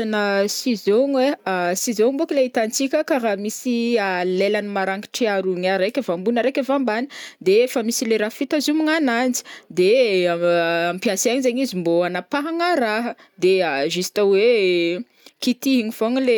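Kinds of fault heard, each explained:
No technical faults can be heard anywhere in this speech recording.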